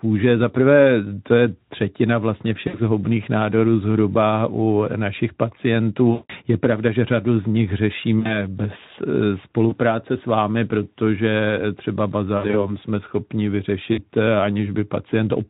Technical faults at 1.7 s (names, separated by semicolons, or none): none